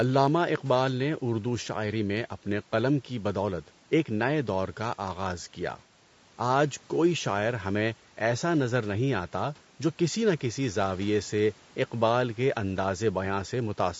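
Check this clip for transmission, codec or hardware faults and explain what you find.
One codec fault runs through the speech: from start to end, low-delay AAC compression, likely AAC-ELD at a rate that fits roughly 32 kbps. Its short frames resolve pitch harmonics poorly, leaving noise between them and a rough, grainy voice. Unlike ordinary band-limiting, the graininess is audible inside the band, not only in the clean cut above 8 kHz from the call's microphone processing.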